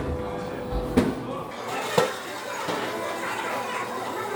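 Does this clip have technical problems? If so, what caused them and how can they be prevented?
Yes. From 1.51 s to the end, the audio is read two samples at a time (double speed). The sound suddenly runs twice as fast and jumps up 12 semitones, a full octave. The reader treats each pair of samples as one frame. It may assume two channels or samples twice as wide. So it consumes the data at double rate. To prevent it, make the reader's channel count and sample width match the stream's real format.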